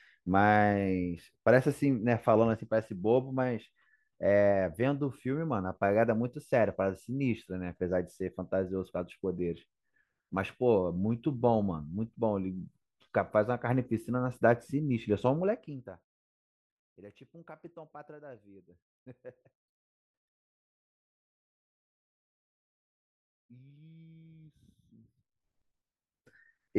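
From 15.26 to 16.13 s, zipper noise: a roughly 25 dB drop applied in unsmoothed steps, about 200 a second, heard as a ticking buzz, with a staircase waveform envelope.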